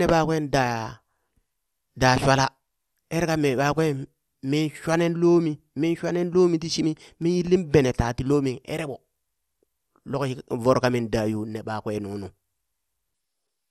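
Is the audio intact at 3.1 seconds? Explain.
No. At 3.1 seconds, as through the whole speech clip, there is plainly audible damage that is likely MP2 compression. The sound is dull and carries a gurgling, granular roughness, consistent with a low rate around 80 kbps. The encoder divides the signal into equal sub-bands and, short of bits, switches upper bands off and coarsely quantises the rest. That flickering of bands sets it apart from a plain low-pass filter, which dulls the sound steadily without the gurgle.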